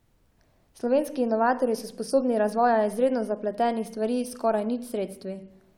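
No technical faults occur at any point in this speech clip.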